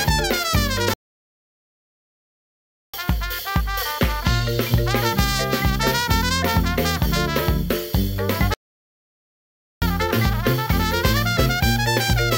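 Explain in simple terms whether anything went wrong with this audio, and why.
The player most likely ran short of incoming data, or was held up internally, and had nothing to send to the speakers, which is a playback stall. It happens twice: from 0.94 to 2.94 s, a full two-second gap, and from 8.54 to 9.82 s, about 1.3 seconds. Each time the sound cuts out abruptly in mid-flow, leaving dead silence, then resumes once the player catches up.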